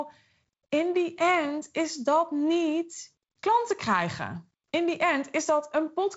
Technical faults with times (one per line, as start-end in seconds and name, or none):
none